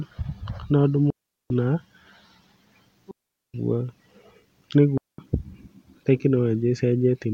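Speech interrupted three times by a digital wireless dropout: at 1.10 to 1.50 s (about 0.40 s), 3.11 to 3.54 s (about 0.43 s) and 4.98 to 5.18 s (about 0.21 s). Each time the receiver lost too much of the link's data and muted almost instantly, leaving a clean hole of near silence. Unlike an analogue radio-mic dropout, there is no hiss, crackle or noise burst at either edge, just abrupt silence and return.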